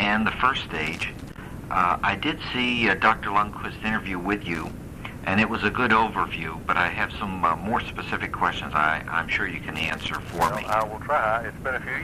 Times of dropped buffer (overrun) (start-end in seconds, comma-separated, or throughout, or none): none